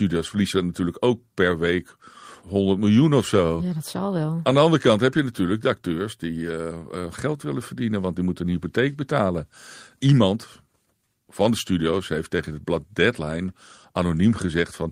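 Right through the speech there's clock drift between sender and receiver: the sending side's clock runs about 3% slow, so audio arrives a little short of what the receiver plays out, and its buffer keeps sliding toward empty.

To keep up, you get repeated timing corrections from 0.18 s to 14.85 s. The receiver keeps repeating short slivers, unevenly spaced but always stretching, adding something like 400 ms overall. It plays at about 97% pace, with faint hiccups and a slightly dragging, unsteady tempo.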